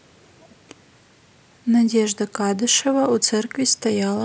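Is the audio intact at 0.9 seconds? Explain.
Yes, the speech at 0.9 s is intact, with no audible fault at that moment.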